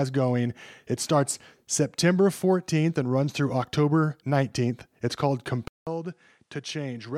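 At 5.68 s, after a 0.19 s gap, speech turns duller and quieter, capped at 11.5 kHz: likely an input switched to a poorer device.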